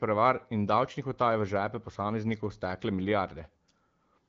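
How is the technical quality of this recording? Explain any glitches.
The technical quality holds up, with no glitches to explain.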